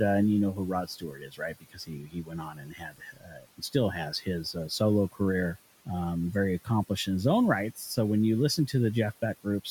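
Speech cut by the noise suppressor appears from 0.52 to 3.75 s, just after "uh and you know", where about two seconds of speech dip by up to about 18 dB. Briefer cuts follow at 4.11 to 4.28 s (about 11 dB) and 7.76 to 7.97 s (about 10 dB), between "accomplished in his own" and "when you". The suppressor mistook quiet speech for the room noise sitting about 21 dB below, so those parts sound swallowed and faint.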